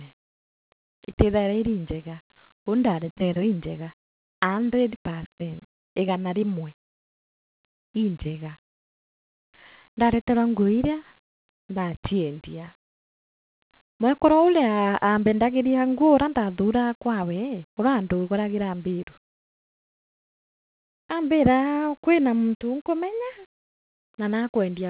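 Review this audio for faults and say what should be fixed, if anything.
Nothing here needs fixing; the speech just carries the narrow band of a G.711 call line, with nothing above 4 kHz, which is exactly what that path gives.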